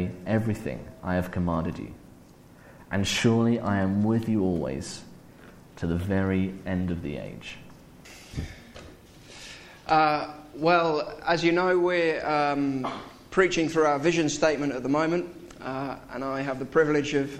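Nothing goes wrong anywhere in this recording, so there's no fault to point to at any moment.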